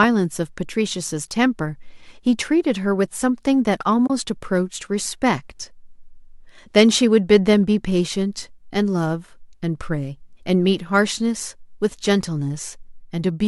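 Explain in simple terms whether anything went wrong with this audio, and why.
AAC frame loss with muting occurs at about 4.07 s, where the speech drops out for roughly 30 ms before returning at 4.10 s. The gap matches about three of the short blocks (frames) that this kind of streamed audio is sent in. When those blocks never arrive, the decoder fills them with silence. Because neighbouring blocks overlap and blend, the sound fades down and back up, leaving a soft-edged hole. The audio was likely coded with a low-delay AAC codec of the kind used in video calls.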